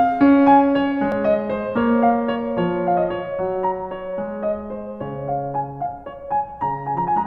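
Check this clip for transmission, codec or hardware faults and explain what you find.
One fault shows up in this music clip. A dropped buffer (overrun) at 1.12 s: the capture likely fell behind, so the hardware overwrote a block of samples before they were read. About 10 ms of music vanishes, and the two sides butt together, giving a small jump forward with no gap.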